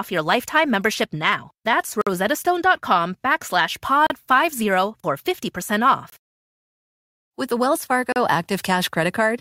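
Speech stops dead at 2.01–2.07, 4.07–4.10, 6.10–6.12 and 8.12–8.16 s. Each is a gap between stream segments, roughly every 2 s. Mismatched segment timestamps leave holes of 52, 34, 23 and 37 ms, filled with hard-edged silence.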